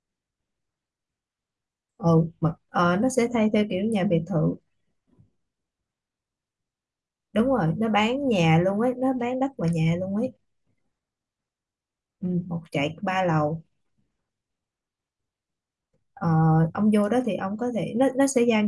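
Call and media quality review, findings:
No faults found in the speech recording. Nothing to escalate for this item.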